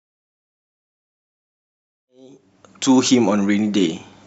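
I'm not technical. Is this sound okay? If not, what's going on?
Yes, this sound is okay.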